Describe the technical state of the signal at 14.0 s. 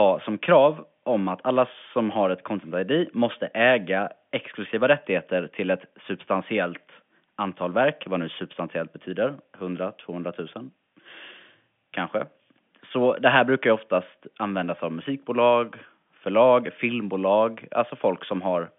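At 14.0 s the speech is intact with no fault, carried over G.711 telephone coding whose narrow 150 Hz to 3.5 kHz line band gives it the usual telephone sound.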